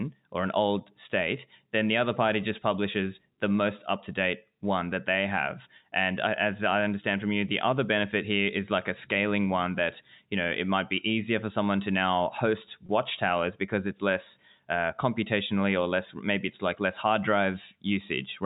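At 12.86 s the speech shows a brief packet loss with pitch repetition, lasting about 30 ms until 12.89 s, which fits three lost 10 ms packets. To fill the hole, the receiver replayed the last pitch period of the incoming signal, so instead of a dropout the sound briefly holds on a slightly buzzy, sustained tone before normal speech resumes. The surrounding G.711 telephone-band audio, capped at 4 kHz, carries straight through the event.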